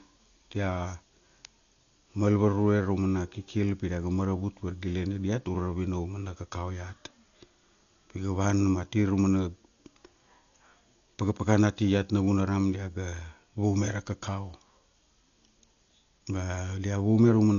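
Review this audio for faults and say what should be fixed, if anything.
Throughout the speech, nothing sits above 6.9 kHz, and rough fluttering noise surrounds tones: likely Dolby Digital compression at a low bitrate near 48 kbps, starving many frequency lines. Encode at a higher AC-3 bitrate, or keep a lossless master for delivery.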